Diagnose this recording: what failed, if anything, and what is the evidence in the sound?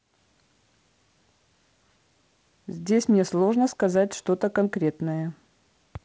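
Nothing failed; this speech recording shows no faults.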